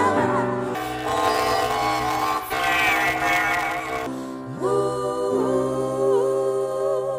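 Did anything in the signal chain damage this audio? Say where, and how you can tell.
Yes. Planar audio read as interleaved, from 0.75 to 4.07 s, points to a sample-format conversion fault at the driver or buffer stage. The sound takes on a robotic buzz near 188 Hz with no clear octave shift. Each block of about 5.33 ms, which fits a 256-sample planar buffer, is packed as all-left then all-right but read as alternating pairs, so it plays twice at double speed. The blocks are short enough that the repetition registers as buzz rather than pitch.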